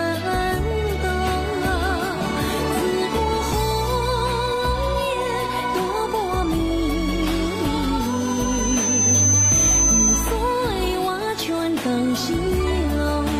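A loudspeaker feedback squeal runs from 7.99 s to 10.43 s. A single tone at 6.2 kHz rises out of the sound over roughly a second and then holds at about 5 dB above the programme until it stops. The microphone is picking up the loudspeaker it feeds, and at 6.2 kHz the loop gain exceeds unity, so that frequency reinforces itself on each pass until the amplifier limits it or the loop is broken.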